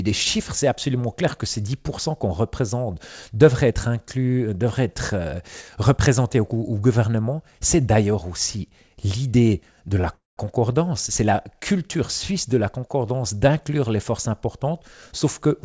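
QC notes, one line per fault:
10.01–10.05 s, short stall from a late packet: A packet arrived after its playout time and the jitter buffer briefly ran dry, so the receiver stretched the last bit of sound for 22 ms until the packet turned up, then resumed from the same point. Nothing is lost; the sound is held slightly too long with a faint buzzy smear, and everything after it plays 22 ms later than before.
10.13–10.39 s, call audio freeze: The sound stops moving forward and the last fragment is drawn out as a fading buzz that sinks to silence for about 160 ms, 238 ms filled in total, before the audio picks up exactly where it left off. The likely cause is packets held up in transit that emptied the jitter buffer. No material is missing, but a gap has been inserted that pushes the rest of the clip later. Through both events the band stops at 8 kHz, which fits the G.722 call codec.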